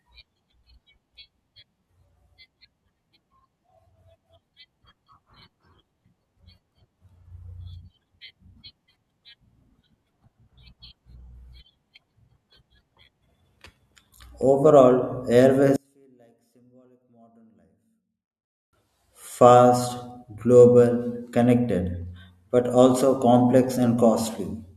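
One channel inverted, from 15.76 to 18.73 s: the speech drops by about 38 dB to a faint residue when the channels are summed to mono. The likely cause is reversed polarity on one stereo channel, so the centred voice cancels against itself.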